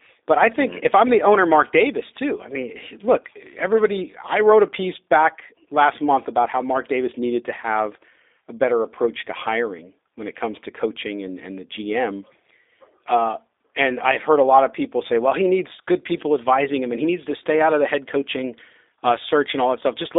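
From start to finish the speech carries G.729 codec damage: the sound is confined to roughly 300 Hz to 3.7 kHz, and the model-based coding, consistent with an 8 kbit/s rate, leaves a plainly audible rough, buzzy, synthetic edge on every phrase.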